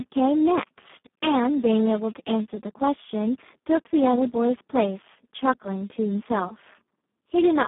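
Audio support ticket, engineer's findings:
Speex codec damage, whole clip. Speech hoarse and noisy, edging toward robotic buzz. Excitation starved of bits; sounds like a very low Speex setting, fits roughly 4 kbps. Phone-style band, about 150 Hz to 3.5 kHz, nothing at all above 3.8 kHz, so no noise-fill up top either. Likely component: low-quality Speex encode somewhere in the VoIP or game chat path.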